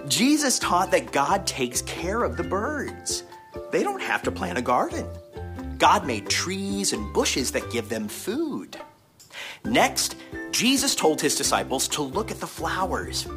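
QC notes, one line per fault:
6.97–13.37 s, crude rate conversion: from 6.97 s to the end, a gritty, inharmonic fizz tracks the loud and bright sound. This fits a 48 kHz to 44.1 kHz change done by picking the nearest sample with no filtering. That periodic sample-skipping error, roughly 20 dB below the signal, shows on a spectrogram as faint stray partials unrelated to the harmonics.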